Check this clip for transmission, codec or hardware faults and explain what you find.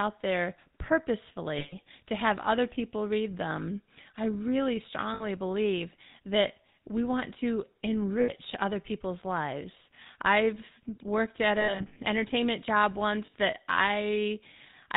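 Two faults: GSM full-rate coding throughout, plus five patches of lost GSM frames.

The whole speech clip runs through the GSM full-rate codec, which fits 13 kbps. Pulse-driven vocal-tract modelling leaves a buzzy, gravelly roughness and nothing above 4 kHz.

Lost GSM frames hit at 1.58–1.75 s, 5.14–5.25 s, 8.2–8.3 s, 11.6–11.97 s (scattered, longest run about 70 ms) and 13.26–13.34 s. The decoder repeats the last good frame at falling level, giving a brief rough, metallic ring.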